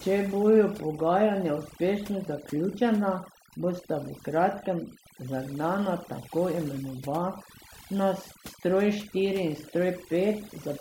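Overdone noise removal runs throughout the speech. Aggressive noise reduction cuts bands near the noise estimate. The background drops and breaks up into twinkling specks.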